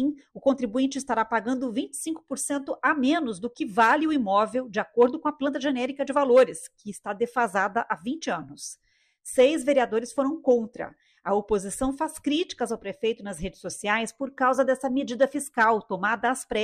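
Nothing wrong was heard anywhere in the recording: no dropouts, level jumps or stray noises to note.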